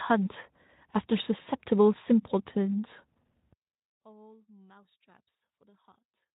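At 1.41 s the speech breaks up for about 60 ms, from 1.41 to 1.47 s. This is VoIP packet loss concealed by the speech codec: roughly 40 ms of audio never arrived, which points to two consecutive 20 ms frames. The decoder filled the gap by extending the last pitch and spectral envelope with falling gain, so the sound smears into a brief buzzy tone or coloured noise that fades. Because each frame depends on the previous one, it takes a moment to regain full clarity.

From 3.53 s to the end of the clip, one channel is inverted. When the stereo pair is summed to mono, the level drops by about 34 dB, almost certainly because the two channels carry nearly identical speech with opposite polarity and cancel each other. What survives is only the small difference between them, a faint residue. The likely cause is a polarity flip on one channel somewhere in the chain. The light Speex coding under the speech does not account for this drop.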